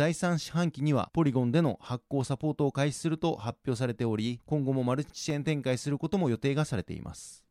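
Four sharp, isolated clicks cut through the speech at 2.21 s, 4.18 s, 5.30 s and 6.14 s. Each is a single brief tick that leaves no audible gap in the sound. Each click is likely caused by dropped samples, where a fraction of a millisecond of the stream goes missing. The waveform then jumps straight from one value to a later one. That step is far too short to remove any sound and is heard only as a click.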